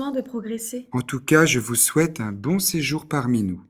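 Nothing here calls for comment, as the audio runs along without any technical hiccup worth pointing out.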